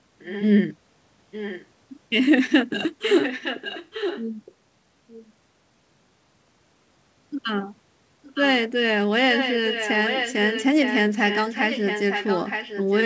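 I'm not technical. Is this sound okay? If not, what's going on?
No. There's an echo leak: a fainter copy of the speech comes back about 0.91 seconds late, at 0.19–0.46, 1.31–1.66, 3.01–4.23, 4.45–4.54, 8.24–8.42, 9.33–10.65 and 10.82 s to the end. Unlike room echo's blur, it's a separate repeat, likely from a loudspeaker leaking back into the call.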